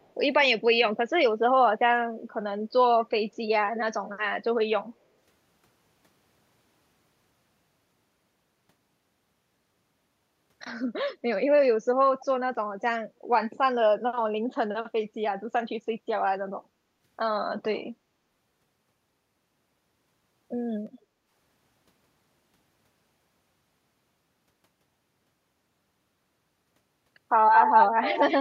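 At 0.0 to 0.13 s, a faint delayed copy of the speech sits far below it, lagging about 181 ms. At 12.2 to 12.25 s, a brief scrap returns about 242 ms late, still quiet. At 27.54 to 27.86 s, a copy about 224 ms late comes back about 5 dB louder than the speech. From 28.02 to 28.37 s, it persists just below. This is echo leak, likely from a loudspeaker echo canceller that failed to remove its own pickup.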